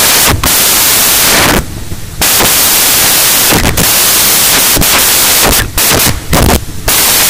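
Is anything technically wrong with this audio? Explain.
Yes. For the whole clip, the samples are built from the wrong bytes: the reader assembles each sample incorrectly, through a one-byte offset, reversed byte order or a wrong alignment, so the rapidly changing low-order bits end up as the most significant part of every value. The result is loud, harsh broadband noise, close to white on loud sounds. Unlike added hiss, which sits at a steady level beneath the signal, this noise takes the place of the signal itself.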